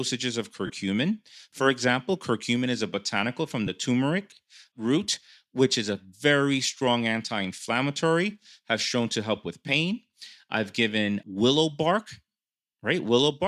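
In this speech clip, two brief noisy smears replace the sound, at 0.66 to 0.70 s and at 3.66 to 3.68 s, between "is a botanical from" and "turmeric root which is". These are lost LE Audio frames, about 30 ms and 15 ms, which fits four and two 7.5 ms frames. The decoder concealed each gap by reusing the last spectrum with random signs. The faint grainy edge throughout is likely light LC3 compression.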